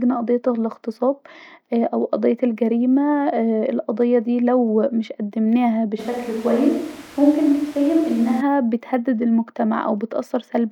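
Speech, which from 6.00 to 8.40 s, right after "ديه لو مش قدمناها", turns suddenly roomy, hollow and thin, with background noise about 25 dB below it at an unchanged level. This is likely a switch to a distant microphone.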